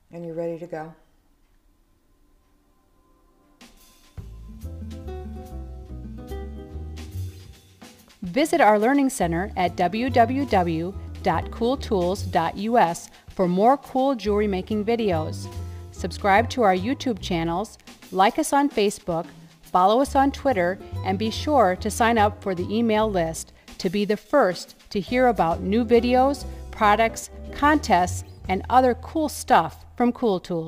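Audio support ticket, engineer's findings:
Sample clock jitter, whole clip. Grainy hiss riding on the audio, worse on loud, bright passages, gone in the gaps. Converter clock wobbling by a few microseconds, so fast slopes get mis-sampled. Error sits roughly 35 dB under the signal. Check the clock source.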